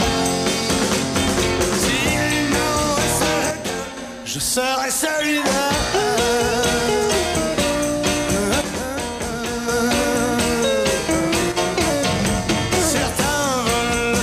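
At 3.51 to 3.97 s, 8.62 to 9.68 s and briefly 11.52 to 11.57 s, the level abruptly dips by about 6 dB and then snaps back. That's likely one channel dropping out, leaving the mono sum with only half the shared signal.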